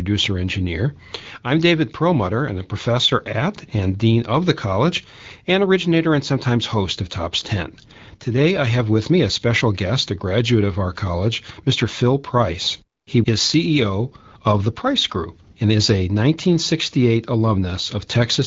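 No faults found in the speech; it is carried over AMR wideband (HD Voice) at 12.65 kbit/s, which keeps it clear with only light coding damage.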